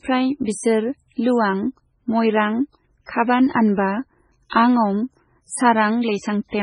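Throughout the speech, the likely cause is MP3 compression at a very low bitrate, with heavy damage that fits an encoder running at about 16 kbps. Starved of bits, it discards the treble entirely, leaving nothing above 10.4 kHz, and drops weaker frequency lines that then flicker in and out between frames. The result is a dull top end with a watery, swirling texture, metallic chirps on s sounds, and consonant onsets that smear rather than snap.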